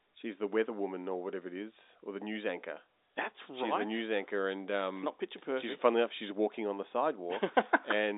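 Nothing stood out on listening to this telephone-band speech, which carries the narrow, boxed-in quality of a G.711 line with nothing heard above about 3.8 kHz.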